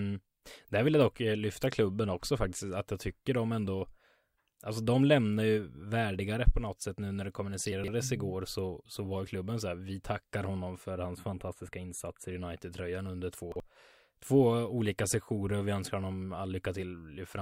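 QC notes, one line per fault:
7.72–7.88 s and 13.52–13.6 s, chunks out of order: after "sätt nu när det", a 40 ms chunk plays three chunks late; at 13.52 s, one chunk late. Jumbled rather than missing.
10.90–12.32 s, channel delay (comb filtering): after "här vi tackar honom", one channel lags by roughly a tenth of a millisecond, consistent with about four samples, and mono summing cuts notches starting around 5 kHz. The result is hollow, unlike a smooth low-pass.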